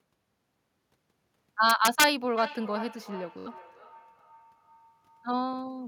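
From 1.70 to 2.04 s, integer overflow hits the loudest peaks. Pushed about 2 dB past full scale, they wrap to the opposite sign and crack harshly.

From 2.38 to 5.43 s, a feedback echo between two devices trails the speech. Each phrase returns roughly every 0.4 s, thin and ringing, at about 17 dB below.

At 3.39 to 3.47 s, a Bluetooth stutter buzzes. A short slice repeats to cover 64 ms of missing audio, which fits a few lost packets.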